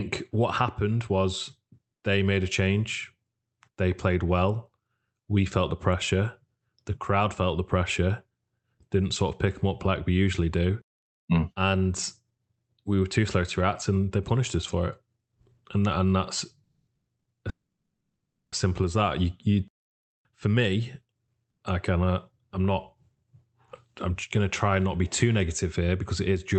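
Speech over a call, and the trouble bunches up between about 16.6 and 21.6 s. First come the call audio freezes, likely from packets held up in transit so the jitter buffer ran dry. At 16.63–16.90 s the last sound is carried on for 240 ms and fades to a brief 40 ms of silence. Right after "that and that's", 16.95–17.10 s adds a 120 ms gap that is almost all silence. The big one, 17.49–18.55 s, is about a second of dead air. A last 100 ms silent hole sits at 21.50–21.63 s, just before "I kind of I'm". In every case the talk resumes where it stopped, so nothing's missing, but each freeze pushes the delay up. Tucked in between, at 17.19–17.28 s, there's a short stall from a late packet. The receiver stretches the current sound by 60 ms while it waits, so you hear one bit held a touch too long before it carries on. Then the jitter buffer speed-up works off some of that built-up delay. From 19.82 to 21.48 s the receiver snips out tiny pitch-period chunks over and over, about 150 ms in total. 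The talk runs at roughly 108% speed with the pitch unchanged and sounds a little rushed. All of it rides on the Opus call path, where audible content stops around 8 kHz.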